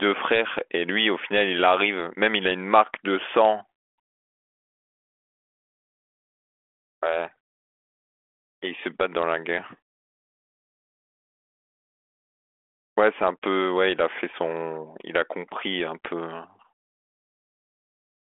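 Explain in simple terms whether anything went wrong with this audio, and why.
Nothing went wrong here; the speech simply has the narrow, telephone-style sound that comes with being carried over a G.726 phone connection, and that's just how such a line normally sounds.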